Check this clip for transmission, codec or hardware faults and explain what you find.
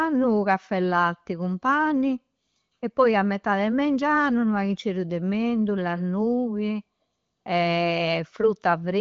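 No transmission, codec or hardware faults.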